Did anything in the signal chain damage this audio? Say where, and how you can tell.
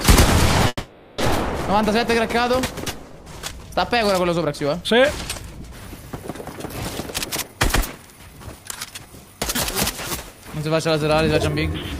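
Yes. Call audio freeze, network and jitter buffer, 0.67 to 1.20 s: the last sound stretches into a fading buzz or hiss, then resumes intact, likely from delayed packets draining the buffer.

Jitter buffer speed-up, 7.25 to 9.22 s: the audio runs at 126% with unchanged pitch, as the receiver trims pitch-period fragments, about half a second in total, to cut the built-up delay.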